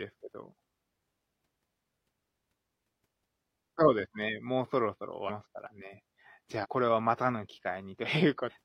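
Whole compressed frames of about 46 ms each are dropped in decoding, so this speech skips ahead three times, an instance of compressed frames skipped. At 5.25 to 5.31 s and 6.60 to 6.66 s roughly 300 ms of audio is lost, which fits about seven frames. At 8.46 to 8.52 s the jump is nearer 700 ms. At each join the speech is abruptly further on.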